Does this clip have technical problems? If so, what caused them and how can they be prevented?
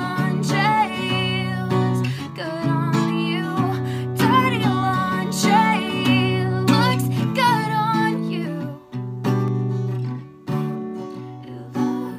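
Yes. Channel delay doubling from 9.48 s to the end: one channel arrives 40 ms late and is summed to mono, producing an equal-level slap echo. Prevent it by aligning channel buffers before any mono fold-down.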